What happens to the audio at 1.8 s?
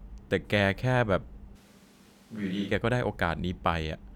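At 1.8 s the speech sounds suddenly roomy and hollow, thinner in the low end, with background noise sitting well below the voice, while the overall level stays about the same. This lasts from 1.57 s to 2.70 s, with an abrupt change in and out. The likely cause is a switch to a distant microphone: the close microphone's feed dropped out, so for that stretch the recording carries a mic further away that picks up more of the room and less of the voice's body.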